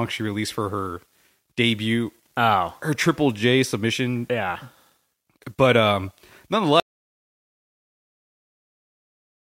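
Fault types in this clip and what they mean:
Audio dropout to silence: at 6.80 s the speech cuts off mid-flow and the remaining 2.7 seconds are silence with no room tone, likely from lost input while recording continued. The waveform flattens out and the spectrogram goes blank.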